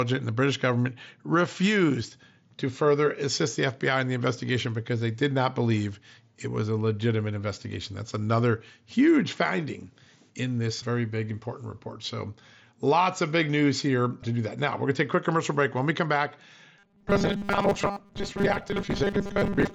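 Right after "we come back", at 16.79 s, the audio becomes a rigid metallic buzz pitched at 200 Hz that runs to the end at 19.75 s. This is robotic sound from repeated short buffers. New audio likely arrived too seldom, so a stretch of about 5 ms was replayed over most of this section while the real audio was skipped. Unlike a hum or whine, the buzz replaces the voice rather than sitting underneath it, yet it still loosely follows the words. Throughout, the mSBC Bluetooth headset codec cuts everything above about 8 kHz.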